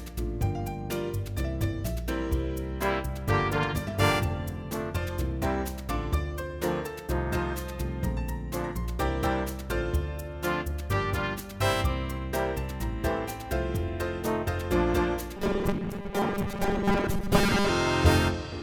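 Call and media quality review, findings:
Robotic sound from repeated short buffers, 15.37–17.69 s. Rigid metallic buzz at 200 Hz, fitting a 5 ms segment looped; most audio in that span is replayed, not new. Likely receive-buffer underrun. Unlike dropouts, no silent gaps; unlike codec warble, pitch stays fixed.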